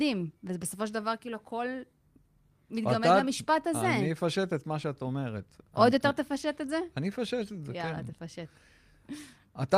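Listening through the speech, nothing stood out as a technical fault at any point.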